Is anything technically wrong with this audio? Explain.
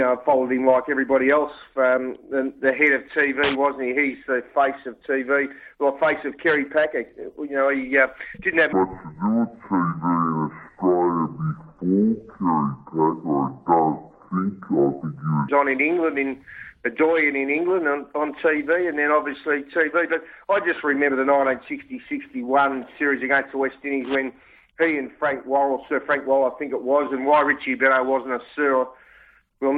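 Yes. From 8.73 to 15.49 s the sound turns deep and sluggish, about ten semitones lower and running at 0.577 times normal speed, then snaps back. This section at the wrong speed was likely played against the wrong clock, dragging pitch and tempo down together.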